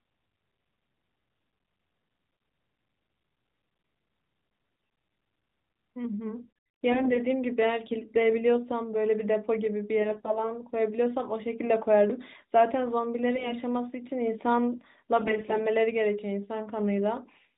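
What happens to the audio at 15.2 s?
From 15.16 to 15.59 s you get AMR bit errors: a few percent of the weakly protected bits in the mobile frames got flipped but still passed the checksum, so pulse positions and fine gain and spectral values go wrong. Pitch and level roughly hold, but the speech turns hoarse, scratchy and gargly.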